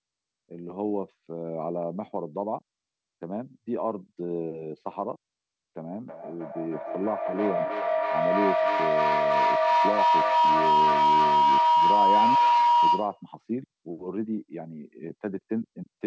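At 6.08 s a feedback howl starts and runs until 13.28 s. Two devices share one room, and each trip round the loop comes back louder. It narrows to a tone near 1 kHz, the loop repeating about every 300 ms and peaking about 8 dB above the speech. The band stops at 8 kHz, which fits a G.722 call codec.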